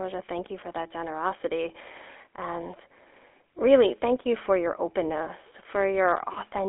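From start to finish, this speech carries GSM full-rate codec damage, plainly audible. The codec rebuilds the voice from a vocal-tract model driven by regular pulses. That gives a buzzy, gravelly roughness. The sound sits in a 300 Hz to 3.4 kHz telephone band. Nothing reaches above about 3.8 kHz.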